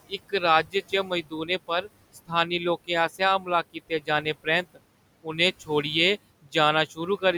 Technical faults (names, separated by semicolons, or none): noise suppressor artifacts; speech cut by the noise suppressor